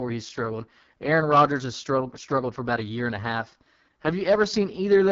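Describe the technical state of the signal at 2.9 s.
At 2.9 s, as throughout, the speech carries AMR wideband (HD Voice) codec damage: rough, raspy texture fitting its lowest 6.6 kbit/s mode, with nothing above 7.3 kHz.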